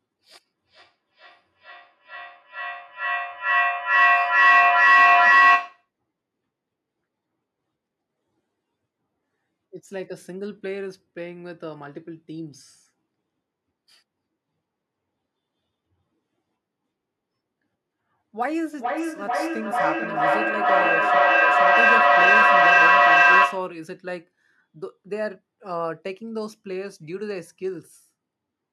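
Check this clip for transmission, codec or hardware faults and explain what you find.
Feedback echo between two devices appears twice, from 0.44 to 5.9 s and from 18.39 to 23.79 s. A second device in the room replays this microphone's signal, which the microphone catches again. Each echo canceller removes only its own playback, so the loop persists. Repeats recur at roughly 0.4 s intervals, growing thinner and ringier, and build to about 14 dB above the speech. Unlike a single room echo, the sound keeps returning at that fixed spacing and swells rather than fading.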